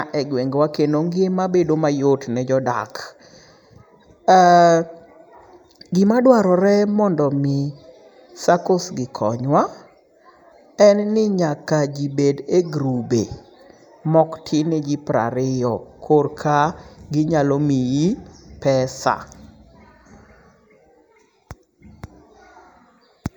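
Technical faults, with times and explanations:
Throughout: channel delay (comb filtering). One channel lags the other by a fraction of a millisecond, so summing to mono cancels energy at evenly spaced frequencies, the first near 3 kHz, leaving the speech hollow and dull. A spectrogram shows steady dark horizontal bands.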